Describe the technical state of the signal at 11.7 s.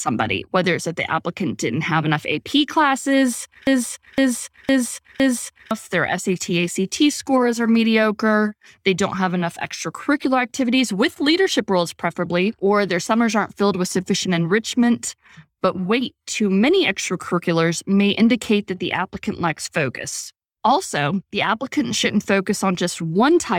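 At 11.7 s the signal is intact, with no audible technical fault at that point.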